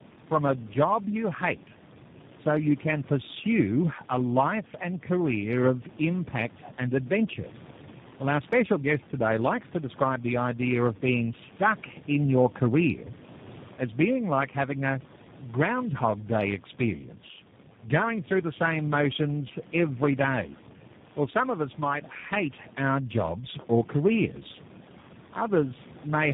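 From start to end, the speech carries tandem speech coding. It sounds rough, muffled and warbly. It has passed through three low-rate speech coders in a row, each re-coding the previous one's damaged output. The errors pile up rather than cancel. The pattern fits a G.729A, G.726 and G.729A chain. Nothing is heard above about 3.7 kHz. The room noise sits about 20 dB below the speech.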